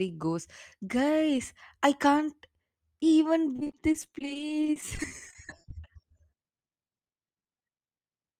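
From 3.56 to 5.71 s there's repeated packet loss, giving that robotic sound: frequent short holes, up to 30 ms each, patched by stretching the last sound, so it turns choppy. Right at the tail, 5.67 to 6.14 s, a jitter buffer slow-down kicks in; the receiver repeats pitch periods to rebuild its reserve, so the audio drags to about 93% speed at the same pitch. Then from 6.09 to 8.01 s the packet loss returns, lighter this time, with gaps up to 20 ms and the same choppy, robotic texture.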